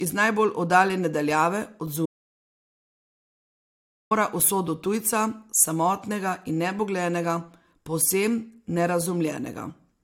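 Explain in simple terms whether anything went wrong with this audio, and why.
Between 2.06 and 4.11 s the speech cuts to total silence for about 2 seconds. This is an audio dropout to silence, likely a lost input while recording continued.

Throughout, the speech has nothing above 16.6 kHz. This is low-bitrate audio saved at a high bitrate. A heavily compressed copy was likely re-saved as a larger MP3, which cannot restore the lost detail.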